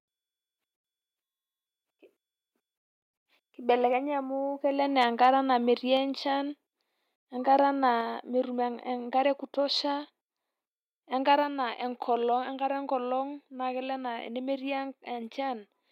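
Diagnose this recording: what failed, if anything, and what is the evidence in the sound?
Microphone overload sits at the converter stage, from 5.01 to 5.29 s, just after "amu kelo". The loudest speech peaks are driven about 2 dB past full scale, so their tops are sheared off and add a harsh, crackly edge. The likely cause is input gain set too high ahead of the analogue-to-digital converter. On a waveform the peaks flatten on a small fraction of samples; a spectrogram shows broadband smearing above the harmonics during those syllables.

Microphone volume stepped down shows up in call processing as three abrupt drops in level, each about 3 dB, at 5.97, 8.01 (just before "metum enkare e kutosha") and 11.43 s. Voice and background fall together in a single step rather than a fade. The first step follows the clipped peak, which points to automatic gain control reacting to the overload, likely lowering the device's input volume each time. 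On a waveform the envelope ratchets down in visible steps; a spectrogram shows the whole band darkening at each instant.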